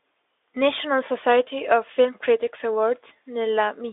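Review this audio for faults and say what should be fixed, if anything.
No faults found in this speech, so nothing needs fixing.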